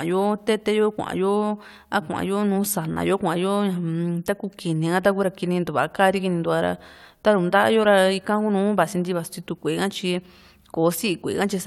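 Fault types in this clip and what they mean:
No faults can be heard anywhere in this speech.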